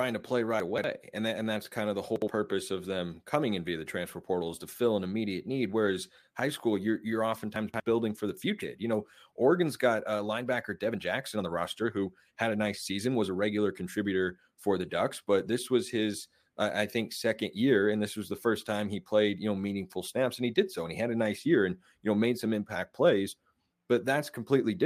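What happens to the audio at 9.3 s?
A jitter buffer speed-up is under way from 8.83 to 14.80 s: the buffer had overfilled, so the receiver repeatedly cut out short pitch-period pieces, trimming roughly 0.7 s. The speech runs about 110% fast at unchanged pitch, sounding hurried.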